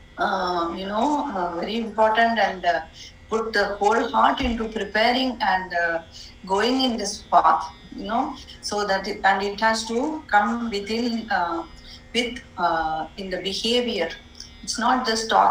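A crude rate conversion runs through the whole clip. The sample rate was raised by a 3:2 ratio, which fits a change from 32 kHz to 48 kHz, using simple linear interpolation between neighbouring samples with no proper filtering. That leaves a repeating error pattern that makes shifted, inharmonic copies of the audio itself. It sits roughly 35 dB below the signal and is heard as a faint, gritty, inharmonic fizz that rides along with the louder and brighter passages.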